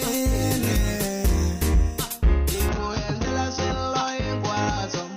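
At 2.69 s the sound abruptly turns duller and boxier and stays that way to the end, with nothing above 6.4 kHz, a level drop of around 5 dB and a new noise floor roughly 35 dB down, with no gap at the change. The likely cause is the input switched to a poorer device.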